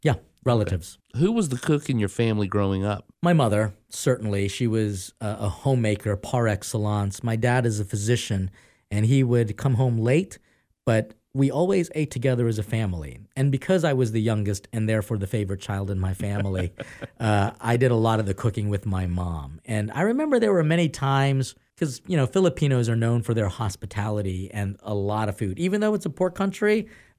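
No technical faults to report anywhere in the speech recording.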